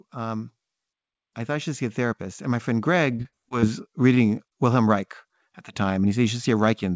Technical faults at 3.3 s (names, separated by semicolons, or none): automatic gain rising; repeated packet loss (robotic sound)